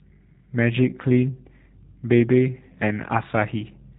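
Throughout the recording the speech has passed through a G.729 codec, which rebuilds each frame from a vocal tract filter, pitch prediction and a few pulses. Nothing above 3.8 kHz survives, leaving a muffled, plainly rough and synthetic tone that fits an 8 kbit/s voice link.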